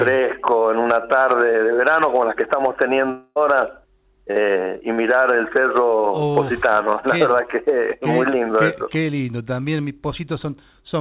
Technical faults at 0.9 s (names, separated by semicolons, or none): short concealed packet loss